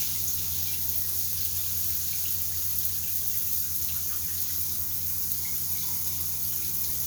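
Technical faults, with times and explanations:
No technical faults detected.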